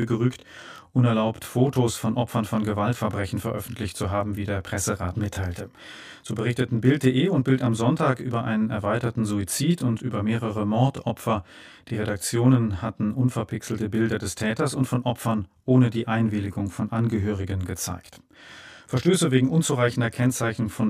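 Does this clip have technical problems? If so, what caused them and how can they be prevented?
Yes. Channel delay (comb filtering) runs throughout the speech: one channel arrives around 20 ms late, and summing to mono cancels shared content at evenly spaced frequencies starting near 20 Hz, giving a rough, slightly doubled sound. Align the channels' timing, or check mono compatibility, before the fold-down.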